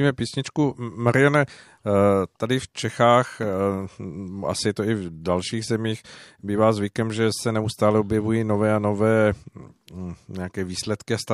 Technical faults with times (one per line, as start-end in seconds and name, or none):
none